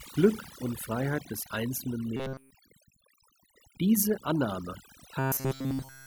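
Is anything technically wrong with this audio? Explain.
Yes. Overdone noise removal runs throughout: aggressive noise reduction cuts frequency bands near the noise floor, leaving near-silent, twinkling gaps.

Robotic sound from repeated short buffers occurs at 2.17 to 2.51 s and from 5.19 s to the end, likely from one short buffer looping in place of fresh audio. This gives a rigid, metallic 133 Hz buzz.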